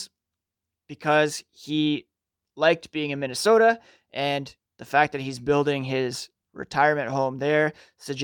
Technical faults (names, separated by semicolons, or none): none